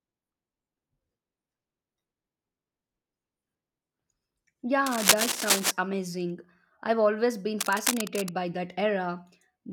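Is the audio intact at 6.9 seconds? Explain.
Yes, the audio is intact at 6.9 seconds, with no fault audible at that moment.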